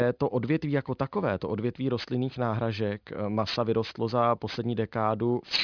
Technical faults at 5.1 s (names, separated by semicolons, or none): aliasing